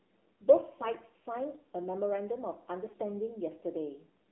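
Throughout, AMR narrowband mobile codec damage is plain. The band is roughly 250 Hz to 3.4 kHz. The speech sounds buzzy and synthetic, which fits a low 7.4 kbps mode.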